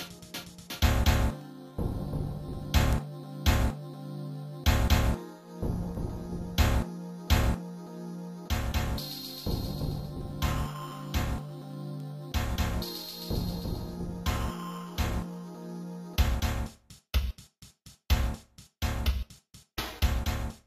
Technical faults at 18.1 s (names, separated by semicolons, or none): word clock ticks